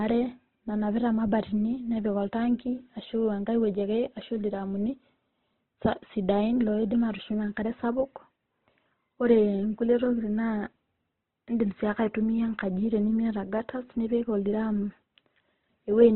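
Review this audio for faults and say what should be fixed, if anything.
Heavy Opus compression runs throughout: the speech sounds grainy and rough rather than swirly like MP3, with nothing above 4.2 kHz, which fits a low bitrate around 12 kbps. To prevent this, encode at a higher Opus bitrate with full bandwidth.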